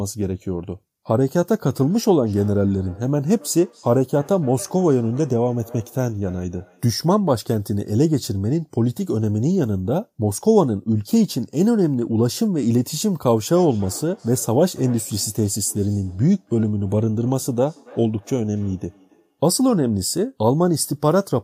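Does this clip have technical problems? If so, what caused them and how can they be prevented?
Yes. Feedback echo between two devices occurs from 1.8 to 7.04 s and from 13.44 to 19.42 s. The speech returns roughly every third of a second, peaking about 23 and about 25 dB below it. Unlike reverb's smooth tail, these are distinct, evenly spaced repeats: one device replays the other's microphone, which recaptures it beyond its own echo canceller's reach. Muting all but one device in the room prevents it.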